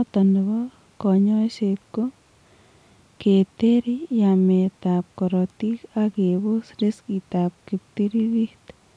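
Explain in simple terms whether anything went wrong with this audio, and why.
Nothing went wrong with this speech recording; no technical faults are audible at any point.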